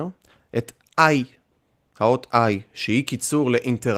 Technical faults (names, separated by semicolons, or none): none